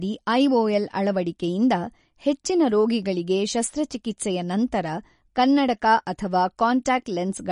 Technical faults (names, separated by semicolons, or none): MP3 compression